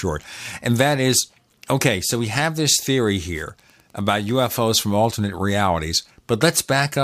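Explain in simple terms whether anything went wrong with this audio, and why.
Something did go wrong: from 2.12 s to 4.70 s, right after "that is okay" and ending just before "from alternate realities", a faint, steady ticking runs under the speech at about ten ticks per second. That is Wi-Fi interference. A nearby Wi-Fi radio sends a short beacon signal every 102.4 ms, and the audio circuitry picked up those radio pulses and turned them into audible clicks, one for each beacon.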